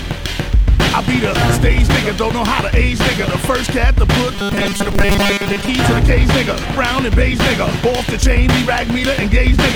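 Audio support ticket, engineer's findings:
Robotic sound from repeated short buffers, 4.32 to 5.69 s. Rigid metallic buzz at 200 Hz over most of that stretch. Likely cause: audio arriving too seldom, with the last 5 ms looped to fill the gaps while real audio gets dropped.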